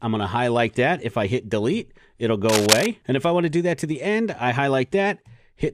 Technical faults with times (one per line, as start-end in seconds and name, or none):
2.49-2.87 cable scratch noise